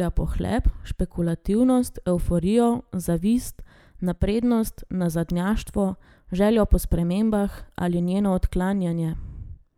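Nothing in this speech recording stood out as a technical fault on listening.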